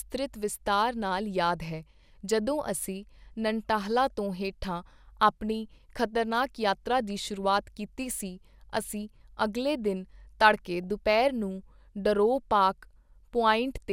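At 10.84 s, and again from 13.61 to 13.71 s, weak reception lets bit errors slip past the error correction into the MP2 audio data, roughly 0.07 and 0.1 percent of bits going wrong. Damaged samples put short blips of noise in single sub-bands, and damaged scale factors throw individual sub-bands up or down in level for up to a frame, producing DAB burbling over the speech. The later patch sounds like a short run of corrupted frames.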